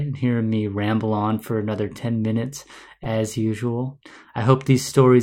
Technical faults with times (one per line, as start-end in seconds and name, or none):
3.03-3.07 corrupt frame decoded